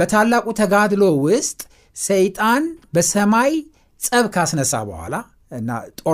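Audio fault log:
No technical fault can be heard at any point in the speech recording, and the signal stays steady and intact throughout.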